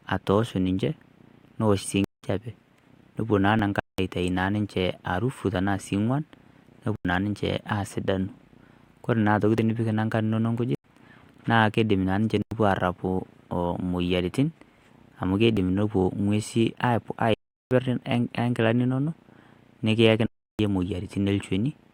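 It's a speech recording with two separate playback problems. The first is blocks of digital silence, hard dropouts to silence, at 2.04–2.23, 3.80–3.98, 6.96–7.05, 10.75–10.84, 12.42–12.51, 17.34–17.71 and 20.26–20.59 s. They run about 93, 186, 329 and 372 ms; all but the 329 ms one are consistent with a player failing to fill 4096-sample buffers in time, sometimes two or four in a row. The second is overlap between stream segments, tiny clicks or skips at 3.60, 9.59 and 15.58 s, spaced every 6 s. Each is where overlapping segment timestamps caused a few milliseconds of audio to be trimmed away, so the waveform jumps at each segment boundary.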